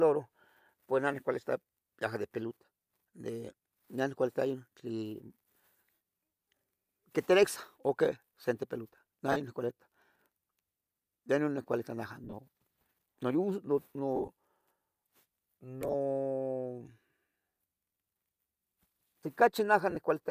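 Lost LE Audio frames break up the speech at 5.94, 9.32, 12.24, 14.16, 15.82 and 19.90 s. Each dropout becomes a brief grainy, hissy smear, because the decoder fills the gap by replaying the last spectrum with scrambled phase. The later four are scattered bursts over about 90, 120, 120 and 60 ms, with the longest runs around 30, 40, 15 and 15 ms, which fits 7.5 ms frames. On a spectrogram the harmonic stripes turn into diffuse noise patches. The waveform shows a fuzzy, softened envelope rather than a clean gap.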